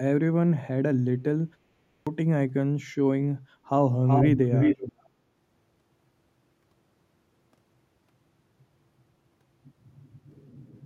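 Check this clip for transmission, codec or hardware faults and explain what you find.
Two faults are audible in this speech recording.

At 1.92 s, after a pause of about 0.44 s, the speech resumes with a clipped start after a pause: roughly 146 ms of onset is missing until 2.07 s, so the first sounds are cut off. The playback device dozed during the gap and needed time to wake and resynchronise. On a waveform, the signal jumps from flat silence to full amplitude with no rise. A spectrogram shows a hard vertical edge instead of the onset's energy.

From 4.07 s to 5.09 s there is an echo leak. A second copy of the speech trails the original by about 377 ms and is roughly as loud as it. The likely cause is a far-end loudspeaker whose echo canceller failed to remove the sound its microphone picked up, so that sound was sent back down the line. On a spectrogram, the harmonic and formant patterns repeat, shifted right by 377 ms. 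The waveform shows each burst doubled at nearly equal height.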